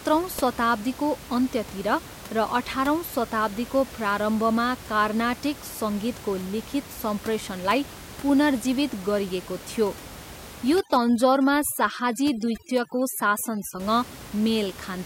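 From 10.8 to 13.8 s, overdone noise removal sets in. Bands near the noise estimate are cut away, breaking the room noise up into twinkling specks.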